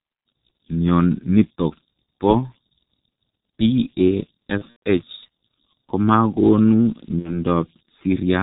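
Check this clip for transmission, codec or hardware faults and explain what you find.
Yes, there's a fair bit going on: three separate problems, two present all the way through and one that hits twice.

Converter idle tones run under the whole clip. An undithered delta-sigma converter slips into repeating bit patterns whenever its input gets small, and here that shows up as a faint whistle somewhere around 5 kHz, sitting about 32 dB below the speech and most audible in the gaps.

The G.723.1 codec damage is heavy and constant. The speech comes out muffled and hoarse, with smeared consonants, because the codec throws away everything above 4 kHz and tracks the vocal tract only coarsely in 30 ms frames. The thin, rough texture fits its 6.3 kbit/s mode.

VoIP packet loss concealed by the speech codec hits from 4.58 to 4.82 s, where losses scattered over that stretch add up to 150 ms, the longest gap being 120 ms. 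The decoder keeps stretching its last pitch and filter with falling gain, so the speech turns into a fading buzz.

The same packet loss concealment returns from 7.19 to 7.41 s with 60 ms missing, which fits two lost 30 ms frames. It's a shorter buzzy smear, and because each frame is built on the previous one, the speech stays weak and a bit distorted briefly after packets resume.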